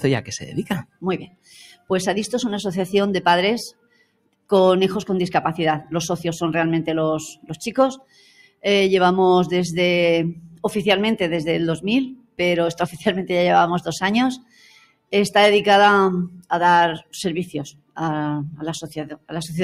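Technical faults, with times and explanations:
Throughout: noise suppressor applied to music or sounds. A speech-oriented suppressor stays engaged and treats sustained content as noise. Its gain swings by roughly 10 dB, so onsets pass while held material and decays sink, giving a pumping, thinned-out quality across the whole clip.
0.83–1.9 s, 3.71–4.51 s, 7.34–8.64 s, 10.36–10.64 s, 12.16–12.39 s, 14.38–15.13 s, 16.29–17.98 s, 18.54–19.32 s: sound cut by the noise suppressor. In each span the suppressor classifies the sound as noise and pulls it down, by about 21 dB at its deepest, about 13 dB at 10.36 s. Tails truncate and sustained parts duck audibly.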